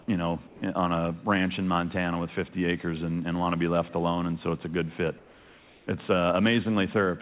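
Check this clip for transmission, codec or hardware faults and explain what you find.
Two transmission faults appear, both tied to the sender's voice detection. The whole clip also stops at 4 kHz, which fits a narrowband call codec.

Comfort noise in place of the background occurs at 0.47 to 0.62 s and again at 5.18 to 5.87 s. The real background gives way to a steady, featureless hiss, about 6 dB quieter in the first pause and about 2 dB quieter in the second. The likely cause is discontinuous transmission: the sender stopped sending during pauses, and the receiver synthesised noise to fill them. A dropout would leave silence instead, and a noise gate would cut the background rather than swap its texture.

An onset clipped by the voice detector occurs at 0.60 to 0.62 s. The sound returns abruptly, without its soft beginning, because the detector was likely slow to react, so those 20 ms went unsent and comfort noise stood in. 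Unlike a mid-sound glitch, the loss sits exactly at the start.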